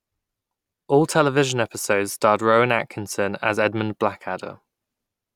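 No technical faults can be heard anywhere in this speech recording; the signal stays continuous and stable throughout.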